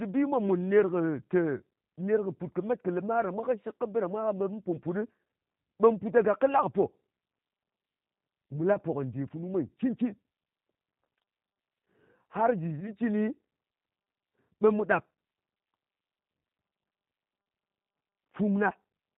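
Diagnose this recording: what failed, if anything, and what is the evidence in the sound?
The codec stage is at fault. The whole speech clip carries plainly audible G.729 codec damage. Nothing above 4 kHz survives, and the voice has a rough, slightly synthetic grain because each 10 ms frame is rebuilt from a vocal tract filter, a pitch predictor and a handful of pulses, which points to an 8 kbit/s G.729A link. Simple low-pass filtering would dull the top but leave the voice smooth. This grain runs through the whole clip and marks a model-based vocoder.

The network stage adds VoIP packet loss concealed by the speech codec at 8.74–8.79 s and 12.80–12.94 s. Each event fits a single lost 10 ms frame. The decoder filled the gap by extending its last pitch and filter with falling gain, so the voice is stretched out and fades. Because each frame builds on the one before, the roughness lasts well beyond 10 ms. 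That lingering tail separates it from a plain dropout, which would give silence or a click.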